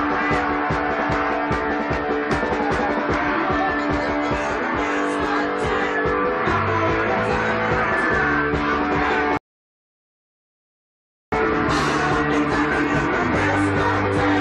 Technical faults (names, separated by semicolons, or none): block of digital silence; rebuffering stall